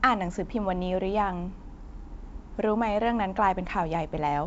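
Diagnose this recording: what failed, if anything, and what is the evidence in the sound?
Nothing in the recording points to a failure at any stage of the chain. The speech carries G.722 wideband telephone coding, with content reaching up to about 7.7 kHz and nothing above, and at most a faint trace of the coder's upper-band hiss, which fits the full 64 kbit/s mode.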